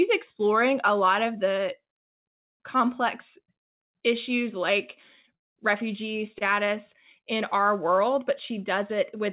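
A speech recording carried over a call link whose sound stops at 4 kHz, which fits a G.711 mu-law codec at 64 kbps. At 5.35 s there is a call audio freeze lasting until 5.58 s. The last sound trails off briefly, then about 190 ms is silent. Speech resumes where it stopped, so nothing is lost. The timing is simply pushed back. The likely cause is delayed packets emptying the jitter buffer. At 6.38 s there is a short stall from a late packet. A packet misses its slot and the buffer runs dry. The receiver stretches the current sound for about 25 ms until the packet arrives. That sound is held too long, with a faint buzz or dip.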